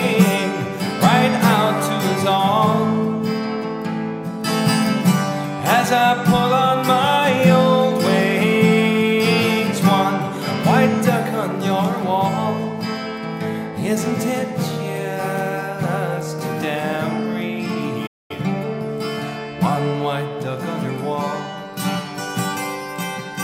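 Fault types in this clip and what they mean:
Playback stall: at 18.06 s the sound cuts out in mid-flow and the output goes silent for 230 ms before resuming. The likely cause is that the player's buffer ran dry or its playback thread was briefly blocked, so nothing reached the output.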